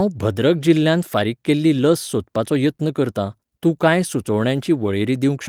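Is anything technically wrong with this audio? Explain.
No, nothing is technically wrong with this audio.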